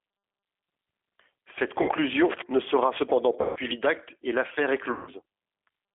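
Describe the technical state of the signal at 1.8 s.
Right around there you hit VoIP packet loss concealed by the speech codec, from 1.82 to 1.90 s, just before "ne sera cependant". About 60 ms went missing, which fits two lost packets. The decoder stretches its last pitch and filter into a smear that fades, and the sound stays a bit weak as it recovers. Underneath, the G.729 codec is plainly audible throughout. It rebuilds the sound from a vocal tract filter and a few pulses per frame at 8 kbit/s, and the line runs 250 Hz to 3.4 kHz, so it comes across thin, rough and slightly synthetic.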